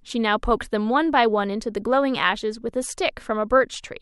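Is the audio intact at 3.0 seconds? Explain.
Yes, at 3.0 seconds the audio is intact, with no dropout, glitch or other fault at that point.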